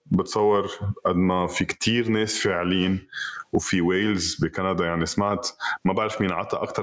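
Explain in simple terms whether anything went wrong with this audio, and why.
Gain pumping, throughout: loud and soft parts end up closer in level and the sound is squashed, likely because gain was set far too high and a fast limiter keeps pulling it down.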